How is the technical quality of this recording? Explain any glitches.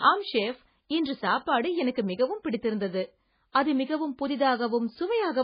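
The technical quality is poor, with heavy codec damage across the whole speech clip. Throughout, the sound is watery and swirly and the treble stops dead. The likely cause is MP3 compression starved of bits, which fits roughly 16 kbps. The encoder zeroes weak frequency lines frame by frame and cuts everything above 5 kHz. A spectrogram shows a hard ceiling at 5 kHz and flickering holes below it.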